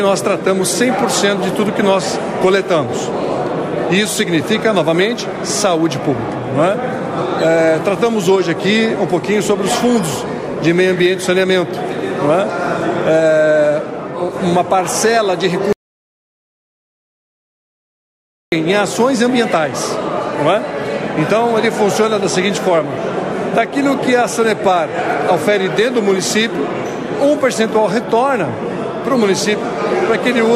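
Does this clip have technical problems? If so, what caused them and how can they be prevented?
Yes. An audio dropout to silence runs from 15.73 to 18.52 s, about 2.8 s. The sound cuts off abruptly and the gap is dead silence, with no room tone. The likely cause is a lost input or stray mute while recording continued. Secure cables and monitor input levels live.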